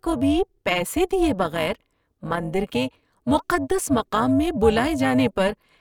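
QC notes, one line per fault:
Throughout: overlap-add ripple. The speech level pulses by about 11 dB roughly 400 times a second, a metallic buzz from frames rejoined with uneven overlap gain.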